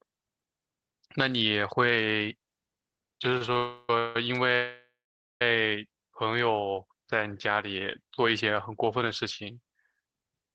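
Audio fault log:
3.37–3.57 s, short stall from a late packet: at 3.37 s and 3.53 s the sound is held for about 32 ms and 33 ms with a faint buzz or dip, as the jitter buffer ran dry and the receiver stretched the last sound until each late packet arrived. Nothing is lost.
3.57–5.42 s, call audio freeze: three holds, at 3.57–3.90 s (0.32 s), 3.99–4.16 s (0.16 s) and 4.55–5.42 s (0.86 s, with the last 0.49 s silent). Each is a fading buzz or hiss before the audio resumes where it stopped, likely from packets held up in transit emptying the jitter buffer.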